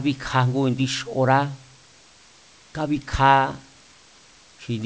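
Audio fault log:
No faults are present in this speech recording. The call path cuts off everything above 8 kHz, which fits a G.722 codec at 64 kbps, and the room noise sits about 36 dB below the speech.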